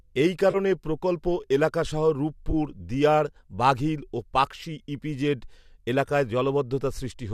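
AAC frame loss with concealment occurs twice. Each time, the decoder lost a short run of frames and rebuilt the gap from the last good spectrum. At 0.51 s, just before "প্রকল্প এলাকাসহ", there is a smeared, noisy 30 ms patch. At 2.51 s, right after "প্রকল্প এলাকাসহ", a similar 20 ms patch follows. Both sit over the faint graininess that likely comes from low-delay AAC coding.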